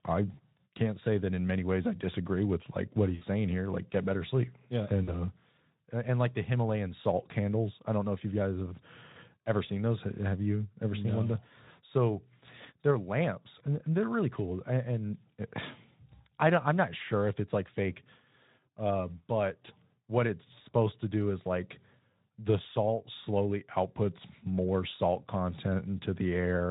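A speech recording carried over a Speex link with light codec damage that has VoIP packet loss concealed by the speech codec at 0.34, 3.16 and 5.03 s. The decoder fills gaps of about 40, 60 and 40 ms by stretching the last sound into a fading buzz, and the voice stays weak briefly afterwards.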